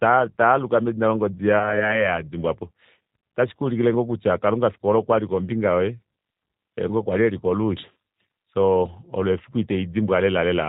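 Throughout, the speech carries G.729 codec damage. It sounds rough and synthetic, with nothing above 4 kHz, which fits 8 kbit/s G.729A. At 1.59 to 1.90 s, after "taaluka medina longodi", VoIP packet loss concealed by the speech codec appears. About 20 ms went missing, which fits one lost packet. The decoder stretched the last sound into a fading buzzy tone or coloured noise, and the voice stays weak afterwards. At 7.93 to 7.97 s, about 40 ms is lost, which points to two packets, and it is bridged the same way.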